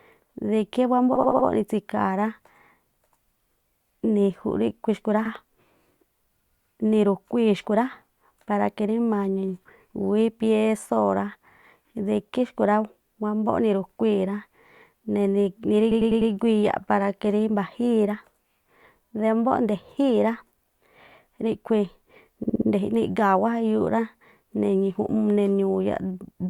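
Repeated frames cause stutters at 1.15, 5.25, 15.91 and 22.43 s. A block of compressed speech (80, 60, 100 and 60 ms long) is replayed four times, or once at 5.25 s, adding 320, 60, 400 and 240 ms.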